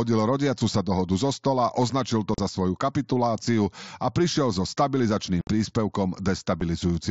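At 2.34 s, after "dohodu zo stola označil", unconcealed Bluetooth headset packet loss cuts a 38 ms hole. More holes follow at 5.41 s (60 ms, after "a prišiel so stabilizačným") and 6.60 s (7.5 ms). The headset link dropped voice packets with no concealment filling the gaps. That leaves hard-edged silences rather than smeared or repeated sound, all within the 8 kHz band of the mSBC link.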